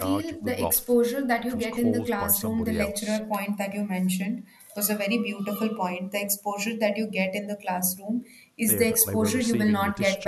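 Nothing goes wrong anywhere in this speech recording, so there's no technical fault to point to.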